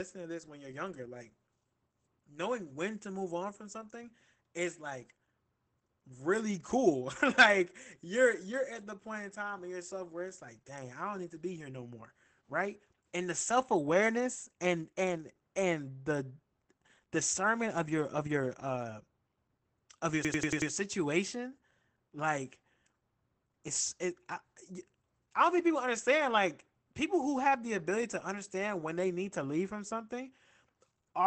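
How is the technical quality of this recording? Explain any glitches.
The recording is speech with two faults: codec damage throughout and one brief stutter.

Opus voice compression runs through the whole clip. The coder models the voice with linear prediction and quantises the excitation coarsely, and the sound points to a low rate of around 12 kbps in wideband mode. The result is plainly audible: speech sounds muffled, slightly hoarse and faintly robotic. There is nothing above about 8.7 kHz, so sibilants and breath lose their top-end crispness.

A system hang loop occurs from 20.25 to 20.71 s. The computer stalled while the audio hardware kept replaying the same ring buffer. A segment of about 93 ms, which fits a 4096-sample buffer, repeats exactly five times at 10.8 Hz. That rate is slow enough that it comes across as a rapid machine-gun stutter rather than a steady buzz.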